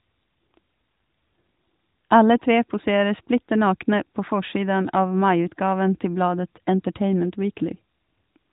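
No technical fault can be heard in this speech recording, which carries the narrowband sound of the AMR mobile codec, with nothing above 3.8 kHz and only the light coding texture that fits its 12.2 kbps mode.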